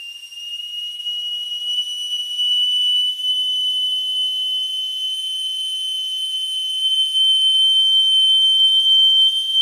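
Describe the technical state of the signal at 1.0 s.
Right around 0.95 to 1.00 s there's a short stall from a late packet: the jitter buffer ran dry, so the last bit of sound got stretched for about 33 ms until the packet showed up. Nothing's lost, just a brief held smear with a slight buzz or dip, and everything after sits 33 ms later.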